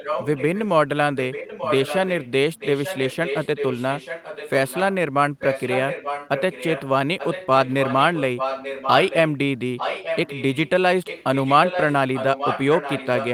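A delayed copy of the speech trails it by about 0.89 s at 0.0–0.68, 1.15–4.95, 5.39–6.88, 7.19–9.3, 9.77–10.69 and 11.05–13.33 s, sometimes only a little quieter, sometimes clearly softer. This echo leak is likely loudspeaker pickup that an echo canceller failed to remove.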